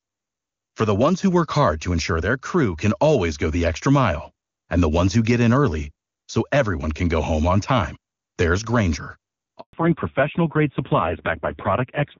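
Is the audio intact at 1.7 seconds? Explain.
Yes, the audio is intact at 1.7 seconds, with no fault at that moment.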